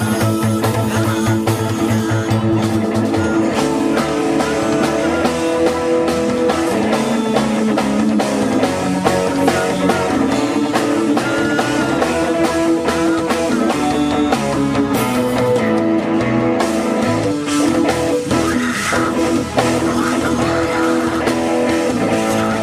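Nothing in the audio stood out as a technical problem on listening.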